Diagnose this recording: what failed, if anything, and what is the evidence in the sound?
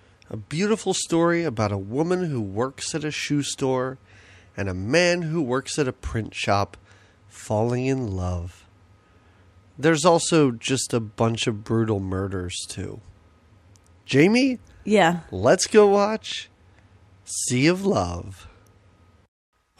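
No failure is audible in this speech recording.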